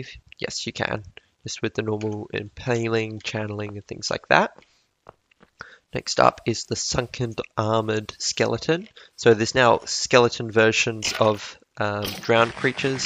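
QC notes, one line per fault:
No faults heard anywhere in this clip.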